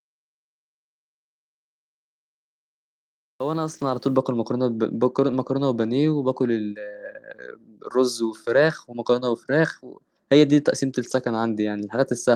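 Lost packets rebuilt from error correction occur at 3.65–3.99 s, and again at 5.31 s, 8.65–8.67 s and 10.99–11.13 s. Each lost packet was replaced by the low-bitrate copy carried in the next packet, so there's no gap. Instead, those stretches turn briefly rougher and noisier.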